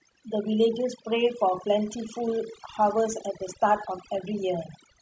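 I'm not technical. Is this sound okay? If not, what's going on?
No, this speech has overdone noise removal throughout: a cleanup tool was set too hard, leaving near-silent gaps with twinkly specks.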